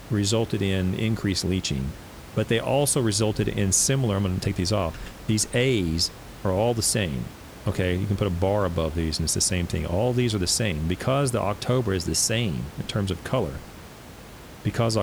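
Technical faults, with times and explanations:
No technical faults; room noise sits well below the speech.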